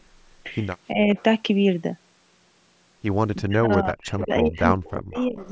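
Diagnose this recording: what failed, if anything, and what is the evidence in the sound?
The speech dips by about 10 dB between 0.92 and 1.16 s, then from 3.39 to 5.47 s sinks by as much as about 40 dB and breaks up for roughly a second and a half in total. This is speech suppressed in double talk, likely the call's echo canceller turning the talker down while the far side was also speaking.

A delayed copy of the speech, trailing by 344 ms, surfaces at 1.17, 3.72, 4.2, 4.84 and 5.14 to 5.5 s. It is mostly about 20 to 30 dB down, but only about 10 dB down at 4.2 s. This echo leak likely comes from a loudspeaker end whose echo canceller let some of the playback picked up by its microphone return down the call.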